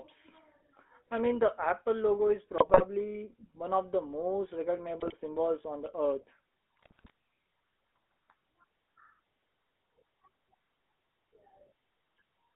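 Right from the start the speech has that buzzy, gravelly GSM full-rate codec sound. The vocal tract is modelled and driven by coarse pulse excitation, and the band is squeezed to roughly 300 Hz–3.5 kHz, which fits the old 13 kbps full-rate coder. Then come GSM bit errors. Flipped bits hit the decoder's filter, pitch and gain values, so frames squawk and gargle: from 2.58 to 2.83 s after "logo is", from 5.0 to 5.14 s after "one of the most", and from 6.76 to 7.1 s after "symbols on the earth".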